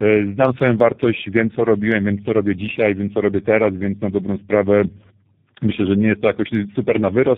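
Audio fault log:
throughout: tandem speech coding. The speech passes through two low-rate speech coders in a row, which fits a G.723.1 stage and then G.729A. The second coder re-codes the first one's errors, so the speech sounds rough, muffled and warbly. Nothing remains above 3.8 kHz.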